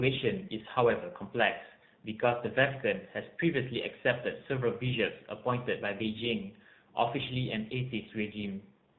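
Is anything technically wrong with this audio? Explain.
Yes, two things. The whole clip has been through the AMR narrowband mobile codec, and it's pretty obvious. Everything is squeezed into an 8 kHz-sampled channel, so nothing above 4 kHz survives and the speech sounds boxed-in and phone-like. On top of that, the codec rebuilds the voice from a vocal-tract model fed by a handful of pulses per sub-frame. The damage is plainly audible: a buzzy, synthetic edge, which fits one of the lower modes, around 7.4 kbps.

Right at the very end, from 8.92 to 8.98 s, you get AMR comfort noise. The phone decided the talker had gone quiet and stopped sending speech frames. The receiving end then filled that tail with synthetic noise generated from a rough description of the background's level and spectrum. So the real background is swapped for a smooth, steady hiss that switches in abruptly.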